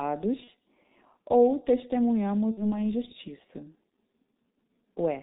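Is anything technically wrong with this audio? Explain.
Yes. The speech runs through the G.723.1 codec for the whole clip. The damage is heavy. This codec cuts everything above 4 kHz and updates its voice model slowly, in 30 ms frames. That fits a rate near 6 kbit/s. The result is muffled, hoarse speech with smeared consonants.

There is also VoIP packet loss concealed by the speech codec, at 0.44 to 0.50 s and at 2.51 to 2.78 s. The decoder fills each gap by repeating its last pitch and filter while lowering the gain. The gaps fit about 30 ms and 60 ms of lost audio. Each gap turns into a stretched, fading sound. The voice stays weak or distorted for a while after each one.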